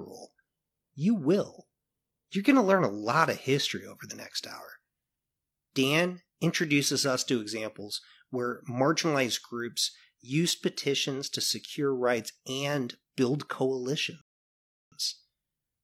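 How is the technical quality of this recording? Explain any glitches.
The speech has one glitch, a rebuffering stall from 14.21 s to 14.92 s. The player ran out of downloaded audio, so the sound drops to silence for about 0.70 s and then continues from exactly where it stopped. Unlike a dropout, which cuts out a piece of the audio, this stall loses nothing. It only adds a pause.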